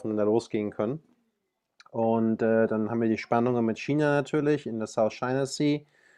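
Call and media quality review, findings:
No audible faults found in this speech recording.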